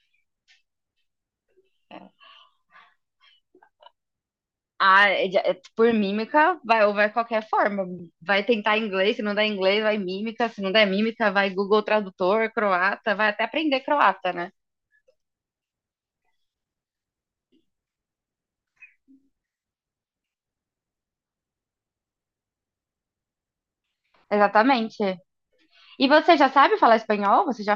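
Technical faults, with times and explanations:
No technical faults heard.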